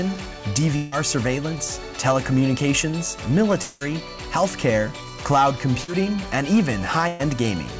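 At 0.76 to 0.94 s and again from 3.62 to 3.89 s, the audio is replaced by a drawn-out, fading continuation of the preceding sound. About 160 ms and then 180 ms of material are skipped before playback picks up further on. A long network dropout is the likely cause. Neither gap decays into silence, and their length sets them apart from the briefer losses later.

From 5.84 to 5.90 s there is a short concealed packet loss. About 40 ms failed to arrive, and the receiver bridged it by extending the last sound and blending back in. This gives a brief smear or wobble rather than an audible hole or held tone.

From 7.08 to 7.21 s, a burst of packet loss removes about 120 ms. The last sound is stretched into a buzz or hiss that weakens as the gap goes on, then the audio resumes past the missing part. This is longer and more obviously fading than the 5.84 s event. Throughout, nothing is heard above 8 kHz, which fits a 64 kbps G.722 call path.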